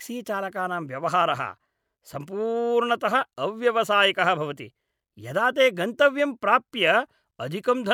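No technical faults can be heard anywhere in the speech recording.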